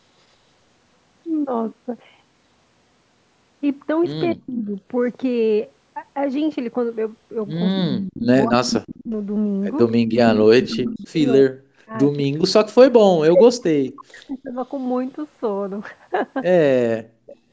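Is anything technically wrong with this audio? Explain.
Yes, the call suffers from two faults: speech suppressed in double talk, and echo leak.

Speech suppressed in double talk occurs at 4.34–4.76 s, 7.75–9.11 s, 10.33–14.57 s and 16.7–17.32 s. When both ends talk at once, the echo canceller likely cannot tell the near talker from loudspeaker echo, so it attenuates everything. The voice here dips by up to about 40 dB, sinking or breaking into fragments. The longest stretch loses roughly three seconds of speech.

Echo leak occurs at 8.03–9.05 s, 10.27–11.03 s, 13.34–13.43 s and 17.27–17.36 s. A loudspeaker's output was likely only partly removed by the canceller, so a copy is sent back 260 ms late. It is usually about 10 dB below the speech, matches its level at 13.34 s, and is faint at about 25 dB down at 17.27 s. It sounds like a trailing second voice. Bandwidth stops at 8 kHz.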